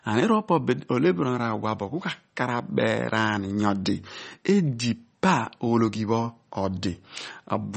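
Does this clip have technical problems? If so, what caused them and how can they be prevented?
Yes. Throughout the speech there is a hard treble ceiling near 8.4 kHz with watery, swirly artefacts. Likely MP3 compression starved of bits, which fits about 32 kbps. Unlike a simple low-pass filter, weak frequency lines flicker on and off frame to frame. Encoding at a higher bitrate, or with a lossless format, would prevent it.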